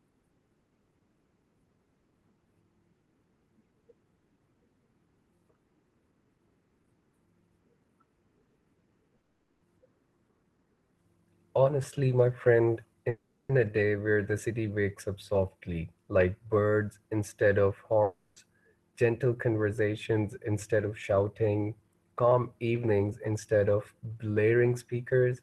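From 9.11 to 9.24 s there's repeated packet loss (robotic sound): four short holes, none over 20 ms, each patched by repeating the last bit, so it goes choppy. Then at 9.24 to 9.62 s, 13.09 to 13.50 s and 18.03 to 18.37 s, the real sound is replaced by a smeared continuation, a buzz or hiss that fades. That's likely a long network dropout each time.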